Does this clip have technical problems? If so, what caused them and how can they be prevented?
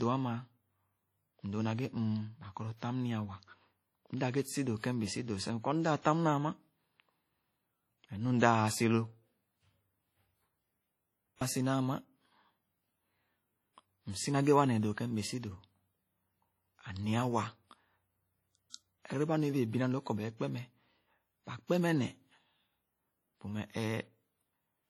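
Yes. Throughout the speech there is a ringing, washy quality and a hiss that swells and fades with the signal, while content still reaches about 20.1 kHz. This is likely heavy WMA compression. The transform codec spreads quantisation noise across long blocks and discards weak spectral detail, which is consistent with a low bitrate around 32 kbps. To prevent it, encode at a higher bitrate or use a lossless or more modern codec.

Pre-echo appears as a brief hiss just before two sharp onsets: one from 11.36 to 11.41 s, spreading about 51 ms, and one from 18.70 to 18.74 s, spreading about 44 ms. The attacks sound soft and smeared. Each one fell late in a long transform block, so noise sized for the loud onset also filled the quiet moment before it. To prevent it, use an encoder with block switching to short windows at transients, or raise the bitrate.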